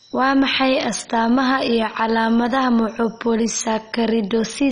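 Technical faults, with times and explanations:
Throughout, MP2 compression damage: the speech sounds dull and carries a gurgling, granular roughness. Nothing is heard above about 10.4 kHz, because whole upper sub-bands have been switched off. The remaining bands flicker in and out and are coarsely quantised, which causes the grainy texture. The damage is heavy. The likely cause is MPEG Layer II coding at a very low bitrate, which fits roughly 32 kbps.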